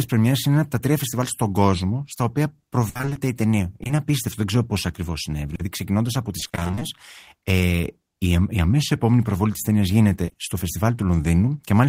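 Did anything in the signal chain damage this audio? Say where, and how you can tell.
Yes. The damage happened in the network stage. It shows up as repeated packet loss (robotic sound) in two stretches. The first runs from 2.89 to 3.17 s, between "στον κόσμο στα οποία" and "η ταινία". Six gaps there add up to 160 ms, 57% of the span, and the longest is 60 ms. The second runs from 6.39 to 6.83 s, where eleven gaps add up to 220 ms, half the span, and none is longer than 20 ms. The decoder keeps extending the last sound, and the next gap arrives almost at once. That is what makes the speech choppy and machine-like, and it separates this fault from an isolated dropout.

The same network path also shows short concealed packet loss. These are isolated holes, each patched by continuing the previous pitch or shaped noise before blending back into the real audio. There are 40 ms at 3.83 to 3.91 s, after "η ταινία" and before "απίστευτο δεν ξέρω πώ". 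There are 40 ms at 5.55 to 5.61 s, and 60 ms at 10.25 to 10.37 s, after "επόμενη προβολή τη ταινία". Each is a brief smear, not a dense robotic run. A short consonant inside one of these holes can disappear.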